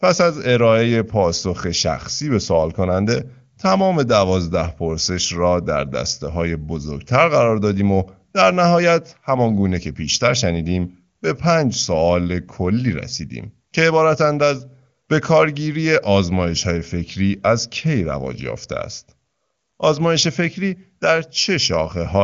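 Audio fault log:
Nothing to log here, just speech carried over an AMR wideband (HD Voice) link at its top rate, with the sound topping out around 7.4 kHz as that path does.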